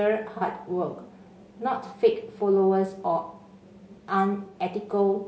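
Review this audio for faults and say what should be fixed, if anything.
Across the whole speech clip the voice sounds rough and grainy, with a hiss sitting between the harmonics and a top band that sounds thinned and synthetic. This is likely low-delay AAC compression, the AAC-ELD kind used for calls. Its short frames cannot separate pitch harmonics cleanly, so at this rate, which fits a bitrate of around 32 kbps, the spare bits run out and noise fills the gaps. Encoding at a higher bitrate, or with a codec mode that has longer frames when low delay isn't needed, would prevent this.

Three brief smeared, noisy patches break the flow, at 0.38 to 0.43 s, 1.88 to 1.93 s and 4.46 to 4.54 s. Each one is AAC frame loss with concealment. The first two gaps are about 30 ms long, which points to a single missing frame, and the third is about 60 ms, which points to two in a row. For each gap the decoder rebuilt the sound from the last good spectrum, and that is what gives the blurred, phasey texture. 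Sending the stream over a steadier link, or adding forward error correction or retransmission, would prevent this.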